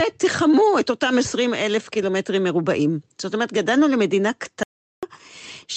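At 4.63 s the speech cuts to dead silence, with no room tone, until 5.03 s: an audio dropout to silence, likely from briefly lost input.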